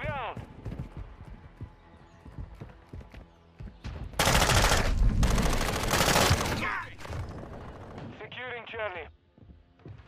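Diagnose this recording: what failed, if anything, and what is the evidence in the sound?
The codec stage failed: compressed frames skipped. At 6.18 s the audio jumps ahead by about one frame, roughly 20 ms given the 23.2 ms frame length.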